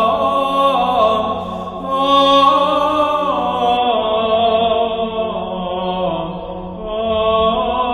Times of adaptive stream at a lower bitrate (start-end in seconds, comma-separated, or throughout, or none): 3.77-7.93